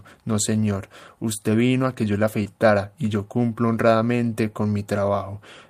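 At about 2.43 s, running to 2.47 s, there is a short concealed packet loss in the speech. Roughly 20 ms of audio did not arrive at the decoder in time, and the receiver covered the gap with about 20 ms of synthesized fill. It extended the preceding signal and then crossfaded back into the received stream. The result is a brief smear or wobble in the sound at that point rather than a clean dropout.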